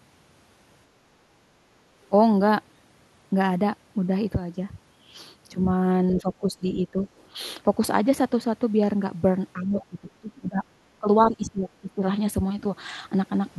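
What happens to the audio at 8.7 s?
Nothing goes wrong at 8.7 s; the audio carries straight through that moment with no dropout, click, distortion or other fault.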